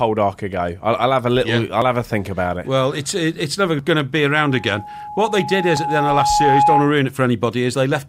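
At 1.82 s the sound jumps forward abruptly, with nothing missing audibly filled in, and the same small skip returns at 3.79 s and 5.77 s. The joins come almost exactly two seconds apart, each dropping a sliver of around 20 ms. That regular spacing points to audio missing between chunks, likely from a recorder or processor handling the signal in 2-second blocks and losing a little at each handover, then butting the two sides together.

From 4.35 s a steady tone at 836 Hz emerges and swells over roughly two seconds until it sits about 5 dB above the rest of the sound, continuing until 6.96 s. The third chunk skip at 5.77 s falls inside it. This is loudspeaker feedback squeal: the microphone was hearing its own loudspeaker, and at 836 Hz the loop gain rose above one, so that frequency kept reinforcing itself.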